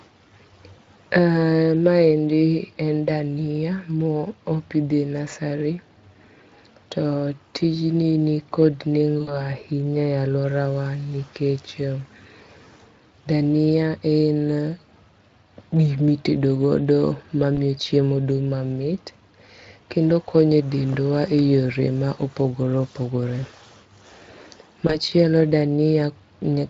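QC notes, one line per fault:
Throughout: Speex codec. The speech has a plainly audible noisy, hoarse roughness, consistent with a Speex setting near 20 kbps. The CELP coder has too few bits to model the excitation cleanly, so the voicing sounds grainy rather than smooth.
9.21–9.34 s (after "to tijni nikod"), 17.55–17.58 s (before "chiemo dung' mamit"), 24.87–24.95 s: VoIP packet loss concealed by the speech codec. Roughly 60, 20 and 20 ms of audio went missing. The decoder extended its last pitch and filter with falling gain, giving brief fading smears that stay weak until decoding recovers.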